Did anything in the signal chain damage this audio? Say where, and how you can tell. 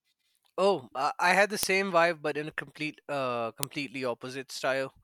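Yes. The damage happened at the storage stage, where the file was assembled. Sharp, loud clicks sit at 1.63 s and 3.63 s, exactly 2 s apart. That spacing points to file header played as audio: joined chunks kept their header bytes, which play as samples.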